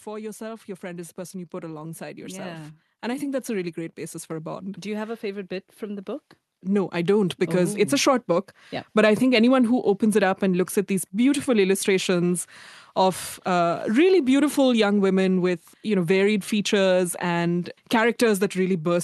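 From 0.05 s to 8.58 s, automatic gain rising: the gain control treats the input as too quiet and lifts it by about 16 dB, swelling speech and background together.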